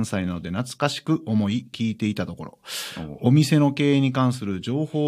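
Speech recording, no technical faults detected.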